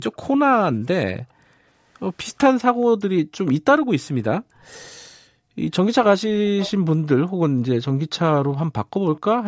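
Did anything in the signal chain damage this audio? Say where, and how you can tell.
Yes. The damage is in the call processing stage, at the echo canceller.

The room background is gated by the echo canceller three times. It drops by about 38 dB between 1.34 and 1.66 s, by about 19 dB between 4.40 and 4.64 s, and by about 29 dB between 5.17 and 5.59 s, then comes back each time. While far-end audio was playing, the canceller clamped the microphone path. That suppression took the ambient floor down with it, so the room briefly goes dead instead of holding steady.

Near the end there are two brief scraps, at 8.52 to 8.56 s and 9.16 to 9.20 s. Each is a faint copy of the speech trailing it by 426 ms, about 25 dB and about 30 dB below the direct speech. A fixed lag and short fragments like these are the signature of echo leak: residual loudspeaker pickup that the canceller failed to subtract, likely from the far end's loudspeaker path, and that was sent back into the call. 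The band-limiting, with nothing above 8 kHz, is ordinary call microphone processing and does not contribute to either fault.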